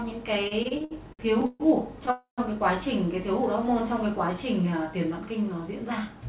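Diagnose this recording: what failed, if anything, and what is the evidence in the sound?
The network stage failed with repeated stalls (stutter) between 0.48 and 1.62 s. The sound catches nine times, each catch filled by a continuation of the preceding sound, the longest lasting 141 ms. Together they add about 358 ms, roughly a third of that stretch, and nothing drops out. Late packets kept draining the jitter buffer, and the receiver bridged each shortfall. Many brief holds in quick succession distinguish this from a single freeze.

From 2.11 to 2.40 s there is one longer call audio freeze. The last sound is drawn out as a fading tail that decays into about 110 ms of silence, 268 ms in all, and then the audio resumes exactly where it stopped, with no content lost. The cause is likely a single burst of packet delay that emptied the jitter buffer, adding 268 ms of latency. A single continuous stop, rather than a rapid series, sets it apart from the stutter earlier.

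Between 5.79 and 6.23 s a jitter buffer speed-up makes the sound run at about 109% of normal speed without any change in pitch. The receiver was shedding excess buffered audio by cutting short pitch-period-sized slices, around 50 ms in total. Because the pitch holds steady, this is time compression in the buffer rather than a resampling or clock-rate error, which would raise the pitch along with the speed.

The band stops at 4 kHz throughout, which fits a G.711 A-law narrowband codec.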